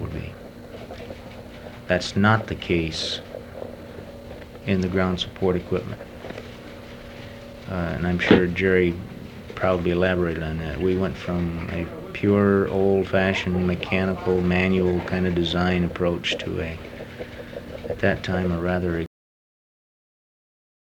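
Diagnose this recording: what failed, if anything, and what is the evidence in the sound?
Cut-off end at 19.06 s: the sound stops mid-event and falls straight to digital silence with no natural decay, holding that silence to the end. This points to the buffer or storage stage, where the final buffers were never written out, so the recording simply truncates.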